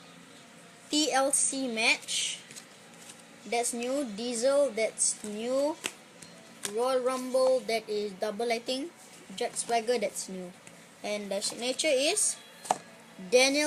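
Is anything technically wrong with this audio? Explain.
No, no technical faults.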